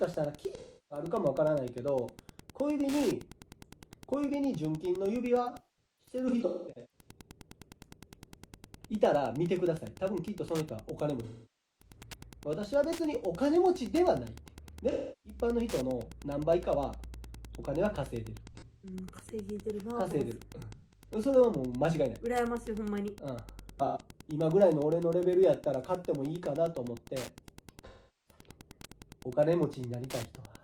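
Wi-Fi interference runs through the whole recording as a steady ticking about ten times a second, spaced 102.4 ms apart, which fits a nearby radio's beacon being rectified in the audio circuit. It sits about 20 dB below the wanted sound. AAC frame loss with concealment causes smeared, noisy dropouts where the decoder patched gaps from the last good spectrum. These occur at 0.55–1.05, 5.43–7.11, 11.23–11.96, 14.90–15.39, 18.47–18.93, 20.72–21.09, 23.86–24.00 and 27.88–28.40 s. The 5.43 s episode scatters about 0.94 s of loss over 1.5 s, with runs up to roughly 0.2 s.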